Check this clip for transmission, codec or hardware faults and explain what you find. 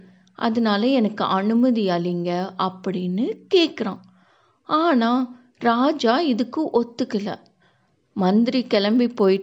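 One fault runs through the whole speech clip: a steady 25 Hz buzz of ticks under the signal, falling silent in pauses. This is a resampler restarted on every block. Each 40 ms block is converted separately, likely from 44.1 to 48 kHz, so every block edge carries a small error.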